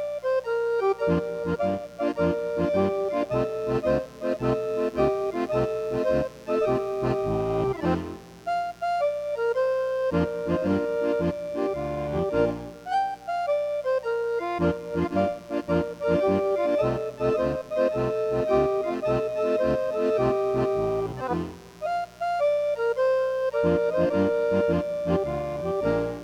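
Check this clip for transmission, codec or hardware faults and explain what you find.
One hardware fault runs through the whole clip: mains buzz at 60 Hz, sitting at roughly 25 dB below the sound. Sharp switching spikes twice per cycle, from a dimmer, rectifier or missing shield, spread harmonics into the kilohertz range, giving a raspy edge that plain low, smooth hum lacks.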